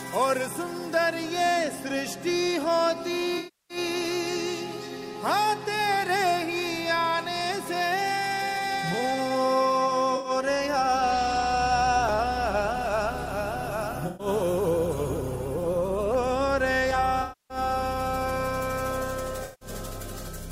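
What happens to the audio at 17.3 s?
At 17.3 s the audio falls inside an AAC frame loss with concealment running from 17.22 to 17.58 s. The decoder rebuilds about 280 ms of missing frames, which fits roughly 13 AAC frames, from the last good spectrum, so the sound turns smeared and noisy. On a spectrogram that stretch appears as a blurred, frozen band.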